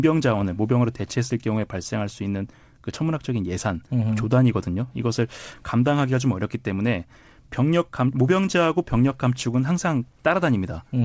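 A speech recording that came through a G.722 call path with nothing above 8 kHz, and nothing in it is technically wrong.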